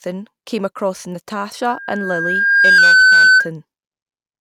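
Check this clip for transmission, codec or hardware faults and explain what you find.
Two faults are audible in this speech clip. One is acoustic feedback. The other is a brief drop in speed and pitch.

From 1.69 s to 3.51 s there is loudspeaker feedback squeal. A microphone is picking up the loudspeaker it feeds. At 1.6 kHz the loop gain rises above one, so that tone feeds itself. It swells over roughly a second. It then sits well above the speech, around 15 dB louder. It stops at 3.51 s.

From 2.78 s to 3.40 s everything slows by 6.06 percent. Pitch falls by 108 cents, just over a semitone, and then snaps back. This is likely a drift correction step. Clock-matching software seems to have changed the playback rate in one jump to rebalance its buffer. Speed and pitch move together. The detuning happens while the feedback tone is running underneath.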